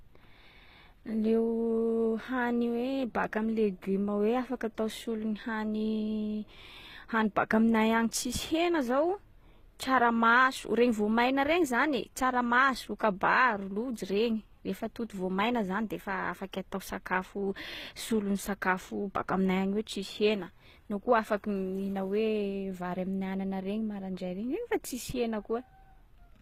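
Transcoding between lossy codecs runs through the whole clip. The speech has nothing above 15.6 kHz and carries two overlapping layers of coding artefacts. It is likely a low-rate HE-AAC encode re-encoded as Opus, the second codec spending bits on the first one's damage and adding its own.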